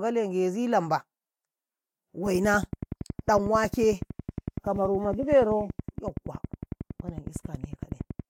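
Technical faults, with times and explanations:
2.26 to 8.21 s, train of clicks: a steady ticking of around seventy near-identical pops, evenly spaced at 10.8 per second and peaking a few decibels above the speech, audible through the pauses too. This is likely interference from nearby equipment or a faulty connection or power supply injecting repeated pulses.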